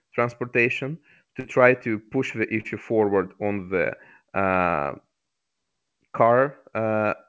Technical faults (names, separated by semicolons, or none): burst of packet loss; short concealed packet loss